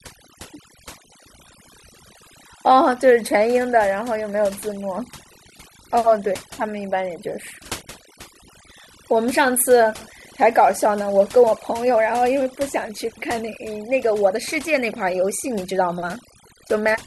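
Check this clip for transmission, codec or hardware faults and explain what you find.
The one fault present is processing, not transmission or hardware. Overdone noise removal runs throughout: bands near the noise estimate are cut, along with quiet parts of the voice, leaving a lowered background broken into twinkling, warbling specks. A low-bitrate codec smears transients instead.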